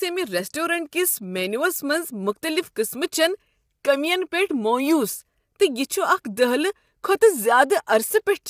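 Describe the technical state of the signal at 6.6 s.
At 6.6 s the speech sounds rough and grainy, with a hiss filling the gaps between the pitch harmonics and nothing above about 15.6 kHz, and this damage runs through the whole clip rather than just this moment. The likely cause is low-delay AAC compression (AAC-ELD), whose short frames resolve voice harmonics poorly and spend bits inefficiently. The plainly audible damage fits a low rate of around 32 kbps.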